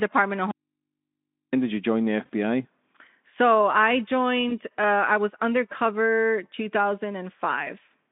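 From 0.51 to 1.53 s the speech drops out to a faint residue, leaving only mains hum far below the voice until "did you join the". That points most likely to a live input after a signal break, and it cuts abruptly rather than fading like a pause. After "did you join the", at 2.25 to 2.30 s, and again from 4.49 to 4.58 s just before "uh I was undercover", packet loss concealed by the speech codec briefly stretches the voice into a fading buzzy tone or coloured noise. These gaps are about 40 ms and 20 ms, consistent with two lost frames and one. Unlike the dropout, they fill with a smeared tone or noise instead of hum, and they take a moment to recover.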